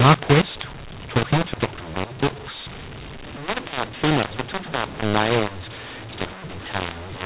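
From start to finish the speech comes through harsh and gritty, loud parts distorted and pauses filled with hiss. It's a mu-law and A-law mix-up: G.711 audio written as mu-law was read back as A-law, scrambling every sample's level.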